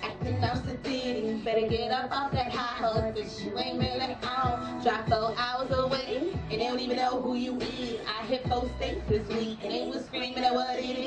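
No technical faults can be heard anywhere in the clip.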